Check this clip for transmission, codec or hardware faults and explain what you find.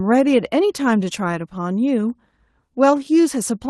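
Nothing in this speech clip points to a fault. The WebRTC call path shows itself only in a top end that stops at about 12 kHz and a coding texture, which fits Opus running at around 20 kbps.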